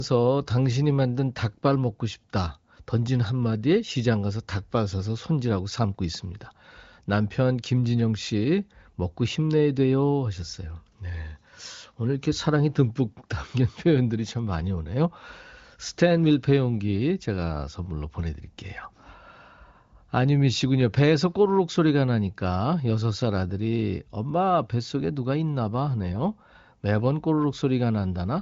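Nothing goes wrong anywhere in the speech here; it comes over AMR wideband (HD Voice) at 23.05 kbit/s, so the top end simply stops around 7.5 kHz, as that codec's band limit dictates.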